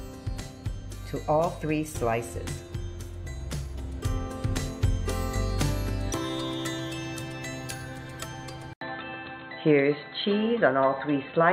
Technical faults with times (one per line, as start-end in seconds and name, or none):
8.73-11.53 input switched to a poorer device